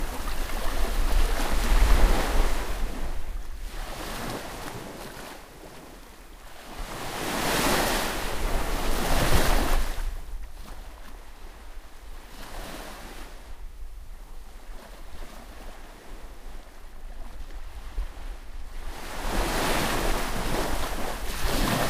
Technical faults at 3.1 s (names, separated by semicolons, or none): none